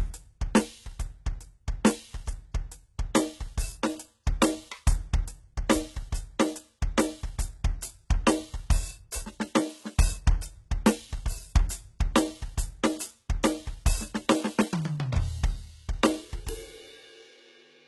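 From start to finish this music has nothing above 11.8 kHz, and the treble that is there sounds gritty and metallic. That points to likely HE-AAC compression at a very low bitrate, around 16 kbps, rebuilding highs from copied lower bands that don't match the real harmonics.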